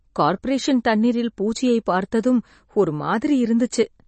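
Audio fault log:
throughout, MP3 compression: Nothing remains above about 8.3 kHz, so the speech sounds dull and the s sounds lose their edge. The codec damage is plainly audible as a watery, swirling texture. This is likely MP3 compression at a low bitrate, around 32 kbps. Short of bits, the encoder cut the treble at a fixed point. It also dropped weak frequency lines that flicker on and off between frames, and that flicker causes the swirl.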